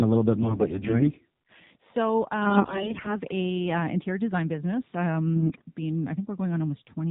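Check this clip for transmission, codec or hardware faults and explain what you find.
Two faults are present: the whole recording carries AMR narrowband mobile codec damage, and three stretches are further corrupted by AMR bit errors.

AMR narrowband mobile codec, throughout: the speech is band-limited with nothing above 4 kHz, and it has a buzzy, synthetic edge. That comes from rebuilding the voice from a vocal-tract model driven by sparse pulses, and the coarseness points to a low mode, which fits about 7.4 kbps. Plain low-pass filtering would sound muffled but natural. Here the tone itself is artificial.

AMR bit errors, at 0.36 to 1.17 s, 2.42 to 3.20 s and 5.36 to 5.62 s: in these stretches the voice turns hoarse, scratchy and gargly while keeping roughly its pitch and loudness. Flipped bits in the less protected part of each frame put the excitation pulses in wrong positions and throw off the finer gain and spectral values. 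The first stretch is milder, and the later two are harsher. Lost frames would produce gaps or smoothed-over fills, but here the sound continues and is garbled instead.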